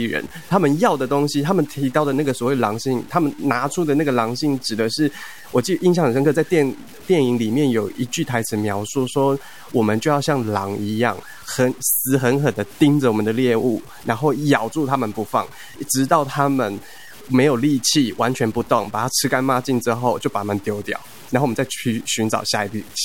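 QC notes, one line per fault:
Throughout: low bit depth without dither. The speech sounds grainy, with a rough distortion that follows the voice and thickens on quiet syllables. Quiet tails sputter or drop out. This likely comes from truncation to about 7 bits, leaving error only about 25 dB down.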